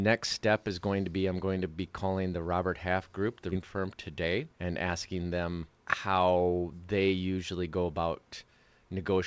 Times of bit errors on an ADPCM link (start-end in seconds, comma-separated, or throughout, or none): none